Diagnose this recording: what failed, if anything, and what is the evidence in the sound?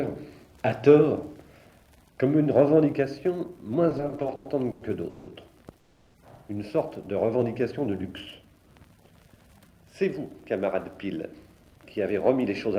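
From 3.89 to 5.29 s the audio drags and stutters, with 15 brief stalls filled by continuations of the sound, the longest 180 ms, about a third of that span in all. This is repeated stalls (stutter) at the network and jitter buffer stage: packets kept arriving late, the buffer kept running dry, and the receiver bridged each gap.

From 5.77 to 6.16 s the sound holds and smears for 370 ms, continuing the last sound with no drop to silence, then resumes where it stopped. This is a call audio freeze, likely caused by packets held up in the network emptying the jitter buffer, which put a 370 ms gap into the stream.

From 10.65 to 11.81 s the audio runs about 6% fast, and from 12.25 to 12.69 s about 9% fast, hurried but at unchanged pitch. This is jitter buffer speed-up. The buffer held more audio than it aims for. The receiver trimmed it by cutting out many short pitch-period pieces, roughly 70 ms and 50 ms in total.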